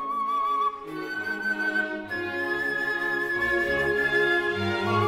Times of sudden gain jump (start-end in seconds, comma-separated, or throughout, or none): none